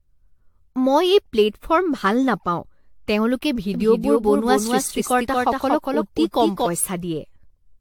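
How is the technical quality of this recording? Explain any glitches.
The recording is compromised by cumulative codec damage throughout and a stretch where the speech is doubled.

Generation loss runs through the whole clip. The sound is swirly, hollow and smeared, with blurred consonant attacks and nothing above 19.2 kHz. This most likely comes from repeated lossy re-encoding, around seven passes, consistent with AAC-LC at 96 kbit/s. A single encode at that rate would not sound this degraded.

A doubled audio track appears from 3.74 s to 6.66 s. A full-band copy trails roughly 200 ms behind, about 5 dB quieter, and starts and stops abruptly. The likely cause is a second, slower capture path or an edit holding two copies out of step. Unlike an echo or reverb, the copy has no decay and no room colour.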